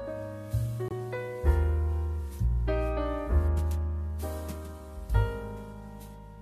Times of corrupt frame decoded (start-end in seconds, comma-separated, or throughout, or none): 3.31